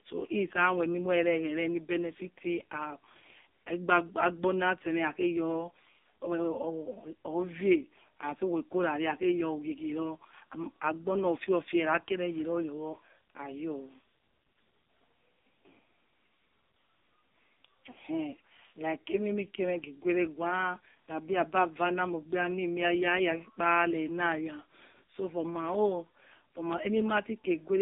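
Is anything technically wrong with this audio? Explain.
Yes. Throughout, the speech sounds thin, buzzy and synthetic, with nothing above 3.8 kHz and a band of about 200 Hz to 3.7 kHz. This is heavy AMR narrowband mobile codec damage, which fits a low 5.9 kbps mode.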